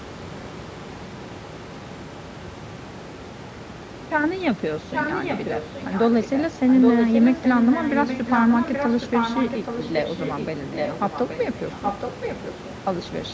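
Speech with an echo leak throughout, from 0.00 to 13.33 s. A distinct second copy of the speech comes back about 0.83 s later, only slightly quieter than the original. It is likely caused by an echo canceller at a loudspeaker end failing to remove its microphone's pickup. Unlike room reverberation, which smears sound immediately, this echo returns as a recognisable repeat after a clear gap.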